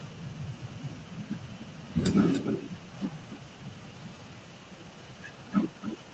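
Speech with an echo leak: a copy of the voice trails 286 ms behind, faint from 0.61 to 1.9 s, about as loud as the speech from 2.32 to 2.94 s, and faint again from 3.18 s to the end. The likely cause is loudspeaker pickup that the far end's echo canceller did not remove.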